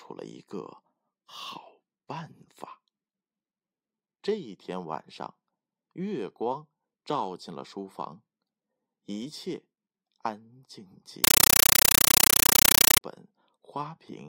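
Speech, interrupted from 11.24 to 13.01 s by a compressed stream played as audio: undecoded AC-3 data reproduced as loud static bursts, 8 ms long, 31.25 times per second.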